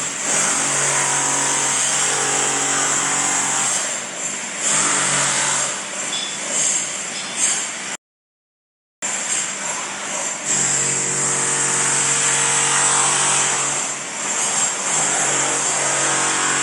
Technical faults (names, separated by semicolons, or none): rebuffering stall